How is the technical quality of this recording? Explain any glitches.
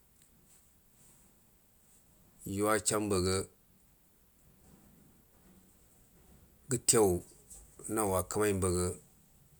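No glitches or technical faults can be heard here.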